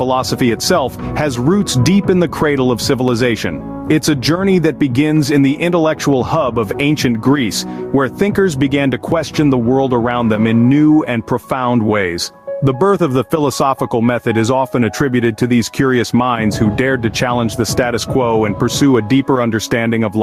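Gain pumping runs throughout the clip: the level ducks sharply each time a loud sound arrives, swinging by around 10 dB. Loud and quiet passages sit unnaturally close in level, giving the audio a squashed, breathing quality. The likely cause is input gain set far too high for the microphone, with a fast limiter or compressor clamping down on each peak and releasing in the pauses.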